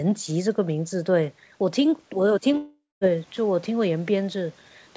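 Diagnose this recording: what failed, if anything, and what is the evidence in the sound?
Long network dropout, 2.57 to 3.04 s: speech dissolves into a fading concealment buzz, then 0.21 s of silence, likely from packets lost in the network.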